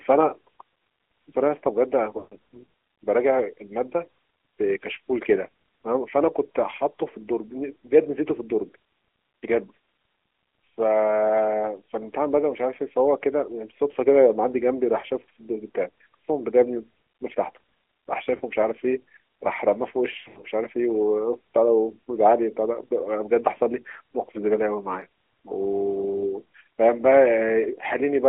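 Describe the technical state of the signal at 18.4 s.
At 18.4 s the sound has lost AMR speech frames, from 18.36 to 18.41 s. For about 40 ms, which fits two lost 20 ms frames, the decoder repeats its last good pitch and vocal tract settings at falling gain. The result is a brief smeared warble and dip rather than the hard click or silent gap of a dropout. Sound then resumes slightly rough.

Underneath runs the AMR narrowband mobile codec, audible throughout. The band is confined to roughly 300 Hz–3.4 kHz, and the speech has a buzzy, synthetic edge consistent with a mid-rate mode around 10.2 kbps. This is a steady colouring, unlike the momentary frame loss.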